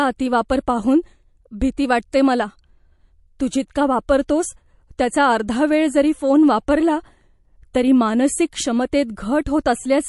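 A watery, swirling quality runs through the whole speech clip, with nothing above 11.3 kHz and plainly audible smearing on consonants. This is likely MP3 compression starved of bits, which fits a bitrate near 48 kbps: the encoder cuts the treble and drops weak frequency lines that flicker between frames.

Brief hisses lasting about 10 ms come just ahead of sharp attacks at 0.49 s, at 3.39 s just before "तू जितका", and at 4.28 s just after "तू जितका", making each onset sound softened. This is pre-echo: quantisation noise meant for the loud attack spreads across the whole transform block into the quiet moment before it.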